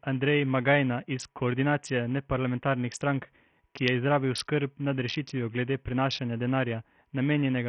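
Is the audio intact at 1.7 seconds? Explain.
No. At 1.7 seconds, as across the whole clip, the speech shows heavy damage consistent with Bluetooth SBC compression, likely from a low-bitrate link. The sound points to a rate near 48 kbps. At that rate, SBC's simple sub-band bit allocation starves the upper bands, so treble drops out or flickers. The remaining bands are coarsely quantised, leaving a gritty noise and aliasing on the speech.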